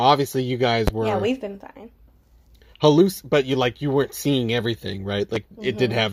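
At 0.88 to 0.90 s, just before "were yeah we've been", and again at 5.35 to 5.38 s, after "you weren't seeing everything", a single loud pop stands well above the speech, the second one lower. It is likely a voltage pulse from a plug, switch or static. The speech continues unbroken beneath it, which separates it from a dropout.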